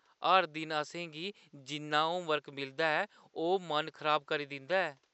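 Nothing stood out on listening to this speech, with only a faint room noise sitting about 46 dB below the talker.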